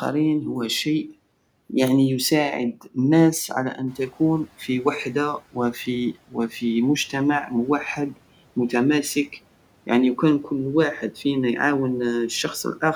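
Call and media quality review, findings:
Speech swallowed, 2.73–2.96 s, just before "الناس على": about a tenth of a second dips by up to about 10 dB. Speech cut by the noise suppressor, which misread it as noise.

Noise surge, 3.87–4.47 s, between "الناس على" and "غي وحدة": room noise jumps about 13 dB and comes through, then sinks by about 8 dB over 600 ms. Noise suppressor catching up.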